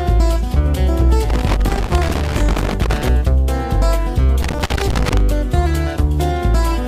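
Loose connector crackle appears from 1.29 to 3.09 s and again from 4.43 to 5.21 s. In both stretches a worn or dirty contact in the signal path is intermittently losing touch, so the audio is chopped on and off many times in quick succession, with small pops where any DC on the line jumps at each break. The result is an uneven, scratchy burst of crackle laid over the sound, lasting about 1.8 s the first time and about 0.8 s the second.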